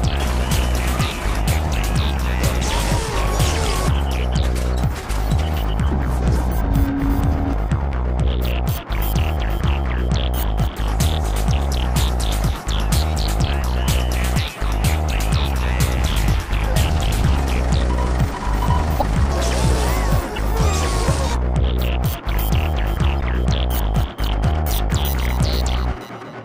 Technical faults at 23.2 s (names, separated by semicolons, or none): corrupt frame decoded